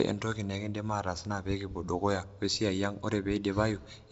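No technical faults occur in this speech clip, which comes through G.722 wideband telephone coding at 56 kbit/s with nothing above 7.7 kHz.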